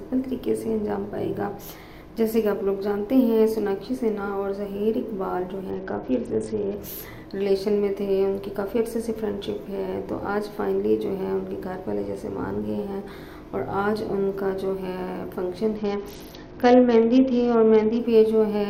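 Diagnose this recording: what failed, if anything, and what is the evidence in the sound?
A Bluetooth SBC bit pool drop hits the codec stage twice, from 5.70 to 6.77 s and from 15.76 to 17.99 s. In both stretches the treble dulls and a gritty, granular noise rises, then full bandwidth returns. The dullness and grit fit the encoder falling from a bit pool near 28 to about 8, roughly 72 kbps. Starved of bits, the upper sub-bands get few or no bits and the remaining bands are coarsely quantised until the link recovers.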